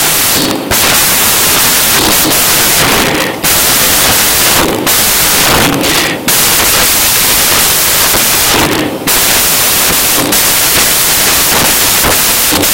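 The whole clip has samples built from the wrong bytes: misassembled sample bytes turn the fast-moving low bits into the bulk of each value, giving loud, harsh broadband noise throughout.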